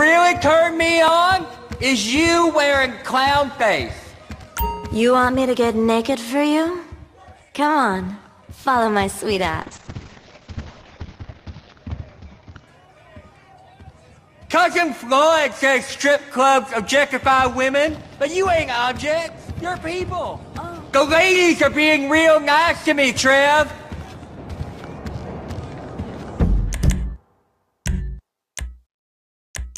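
From 9.62 to 13.73 s, a call bitrate drop makes the sound coarse and muffled, cut off above 8 kHz. Unlike packet loss, it has no gaps.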